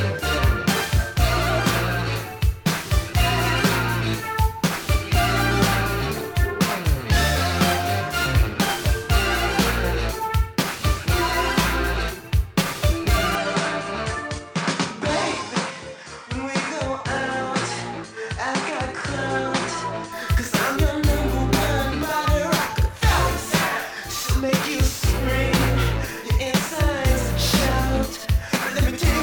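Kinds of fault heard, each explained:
Input switched to a poorer device: from 13.35 to 20.12 s the sound turns duller and about 5 dB quieter, with a new noise floor roughly 35 dB down, likely from a change of microphone. A spectrogram shows nothing above 9.6 kHz there, with no silent gap at either switch.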